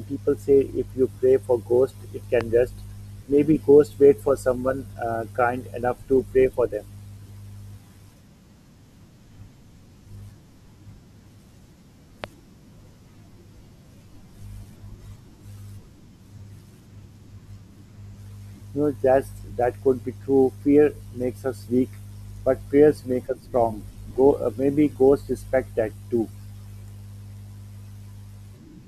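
A loud pop lands at 2.41 to 2.43 s, just after "pray for ghosts it", and another at 12.24 to 12.26 s, peaking about 10 dB and 15 dB above the speech. Each is a single thump, likely a voltage pulse from a plug, switch or static. Unlike a dropout or glitch, the speech carries on unbroken beneath it.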